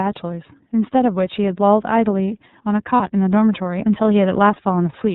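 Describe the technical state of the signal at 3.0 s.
At 3.0 s a lost iLBC frame, from 2.97 to 3.01 s, made the decoder repeat the last pitch cycle blended with noise, so a brief buzzy held vowel briefly replaces the speech before it snaps back. Throughout, the iLBC codec, which fits 30 ms frames at about 13 kbps, cuts everything above 4 kHz and codes each frame independently, making the speech plainly rough and synthetic.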